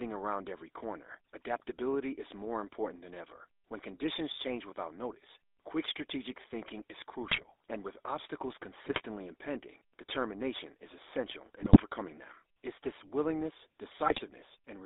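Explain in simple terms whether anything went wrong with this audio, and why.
The whole recording sounds buzzy, gravelly and thin, like an old mobile phone call. That's the GSM full-rate codec, which rebuilds speech roughly and drops the higher tones.

Brief squawks and gargling bursts break in at 7.23 to 7.44 s, 8.84 to 9.01 s, 11.62 to 11.83 s and 14.06 to 14.21 s. These are GSM bit errors: corrupted data on a weak link garbles the sound for a moment.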